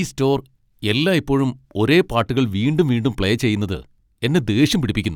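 No technical faults occur at any point in the speech, so there is nothing to place in time order.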